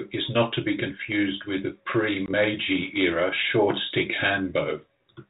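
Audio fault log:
2.26–2.32 s, packet loss on an ADPCM call: a 20 ms silent hole after "be confused with the", fitting one lost packet. The decoder's predictor falls out of step, so speech returns briefly distorted.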